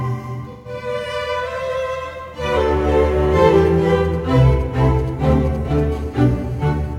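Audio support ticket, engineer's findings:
AAC frame loss with concealment, 0.52–0.68 s and 5.64–5.69 s: decoder lost frames (gaps fit three frames and one frame of about 43 ms each) and rebuilt them from the last good spectrum. Music goes briefly smeared and phasey, about 130 ms, then 40 ms.

GSM signalling bursts, 3.58–5.80 s: nearby 2G handset sending short burst groups, consistent with pre-call or pre-SMS signalling, rectified in the audio path. Galloping dit-dit-dit ticks and brief 217 Hz buzz fragments, roughly 25 dB under the music.

GSM phone buzz, 5.92–6.94 s: handset now transmitting continuously, which fits an active call, and bursts at 217 Hz are demodulated by the input stage. Steady, raspy, harmonic-rich 217 Hz buzz, about 31 dB below the music, unrelated to it.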